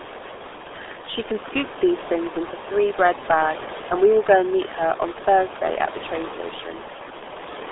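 Throughout, RealAudio 14.4 codec damage leaves speech muffled and gargly above room noise about 10 dB below the speech, nothing past 3.7 kHz; that smearing, unlike clean telephone filtering, fits 8 kbit/s.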